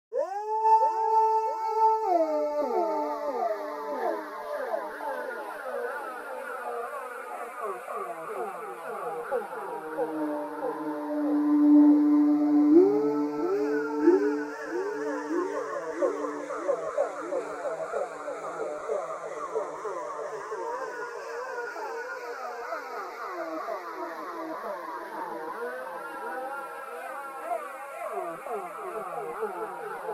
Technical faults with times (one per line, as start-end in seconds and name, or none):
none